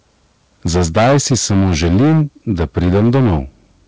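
From 0.66 to 2.22 s the speech turns harsh and crackly on its loudest syllables: the peaks are flattened, with the signal driven roughly 13 dB past full scale and close to a third of the samples squared off. That's microphone overload, most likely an input level set too hot for the converter, so the tops of the waveform simply get chopped.

Right at 0.77 s, just after those first distorted peaks, everything (voice and background together) drops by about 3 dB in one step. That's the microphone volume being stepped down, likely the call software spotting the clipping and pulling the device's input gain back. It doesn't cure the problem, though.

From 2.5 to 3.41 s the same overload comes back, about 10 dB over this time, with roughly a fifth of the samples clipped, so the crackle is a bit milder but still clearly there. Throughout, nothing sits above 8 kHz, which fits a wideband call codec like G.722 on the call path.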